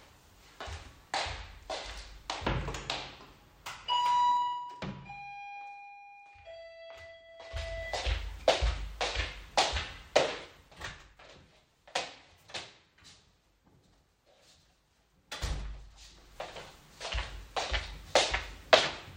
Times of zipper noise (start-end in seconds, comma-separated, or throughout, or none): 4.29-4.90, 7.26-7.88, 10.40-11.19